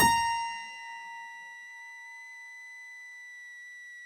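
A switching supply whistle runs through the whole music clip: a high tone near 2 kHz, wandering between about 1.95 and 2.02 kHz, sitting roughly 15 dB below the music. A power supply is cycling in an audible burst mode or beating with another supply, leaking its switching rate into the signal path.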